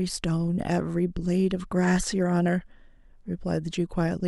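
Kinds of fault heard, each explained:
Nothing here stands out as a technical fault; the speech comes across without any audible problems.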